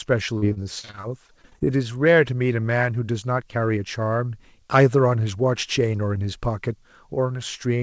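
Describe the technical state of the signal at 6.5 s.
At 6.5 s the speech is intact, with no fault present, only the ordinary coding of the call path, which carries nothing above 8 kHz.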